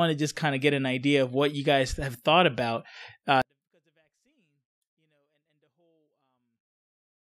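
At 3.42 s the speech falls abruptly to near silence and stays there to the end, a 24-bit alignment error (too quiet). Samples sitting in the low 24 bits of each 32-bit word are being read as full 32-bit values, so every sample loses about 48 dB of level while keeping its shape. On the waveform the trace collapses to a thin line; the spectrogram shows the same patterns, drastically dimmed.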